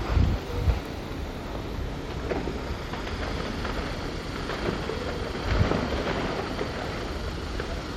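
A recording of everyday sounds, with nothing technically wrong with it.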